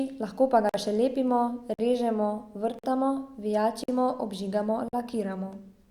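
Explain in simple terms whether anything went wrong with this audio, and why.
Yes, there is a gap between chunks. The speech stops for about 48 ms at 0.69, 1.74, 2.79, 3.84 and 4.88 s, once after every second of sound.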